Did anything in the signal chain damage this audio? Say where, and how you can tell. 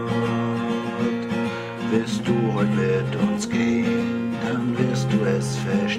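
No, nothing audible points to damage at any stage of the chain, from capture through to playback.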